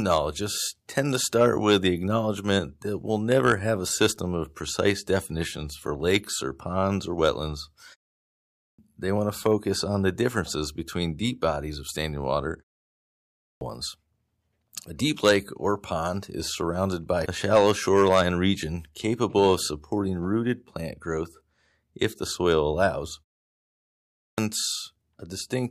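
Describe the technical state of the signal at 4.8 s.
At 4.8 s the speech signal is intact, with no fault audible at that moment.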